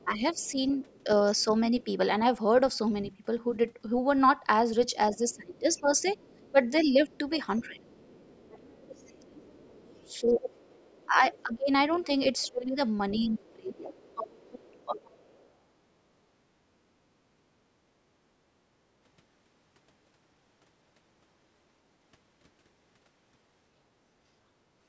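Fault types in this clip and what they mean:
Other side's voice leaking through: A second, fainter voice sits under the talker, about 35 dB below the speech in the first two seconds and much more present from about 5.1 to 15.5 s, where it runs only some 25 dB below the main speech. The likely cause is that the far end, played on the talker's loudspeaker, reached the microphone and the echo canceller failed to strip all of it out.
Speech suppressed in double talk: The talker's own speech sags and thins in patches, briefly in the first second and a half, then more heavily between about 5.2 and 7.8 s and again from 10.2 to 13.9 s, dropping by up to around 20 dB for roughly a second and a half in each stretch. This likely happened because both sides spoke at once, and the canceller turned everything down.
Background gated by the echo canceller: Around 17.2 to 17.9 s the room sound behind the speech sinks by about 10 dB for roughly a third of a second, then returns. 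This is the echo canceller clamping the microphone while the loudspeaker was active, pulling the ambience down with it until it released its hold.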